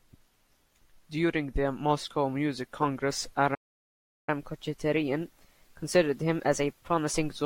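The player most likely ran short of buffered data, or its output thread was held up, so at 3.54 s the speech simply stops in mid-flow. This playback stall leaves a gap of silence of about 0.73 s, lasting until 4.29 s, with nothing feeding the output in between. When the sound returns, it picks up from where it broke off rather than skipping ahead.

To recover the lost time, the player then resamples its backlog and runs it faster. This catch-up at higher speed runs from 4.29 s to 7.29 s at 1.1 times normal speed. Because resampling ties pitch to speed, the speech sounds hurried and sits roughly a semitone and a half higher, giving it a slightly squeezed, brighter quality until it settles back to normal pace and pitch at 7.29 s.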